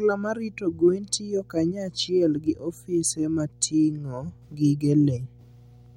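From start to finish the speech sits on a steady mains hum at 60 Hz, roughly 25 dB below the voice. Mains current has leaked into the signal chain, most plausibly through a ground loop or a nearby transformer, so a low buzzing drone persists under every pause. On a spectrogram it shows as a thin, unbroken horizontal line at 60 Hz, with fainter harmonic lines above it; in the waveform, silences carry a regular low-frequency ripple instead of flat baseline.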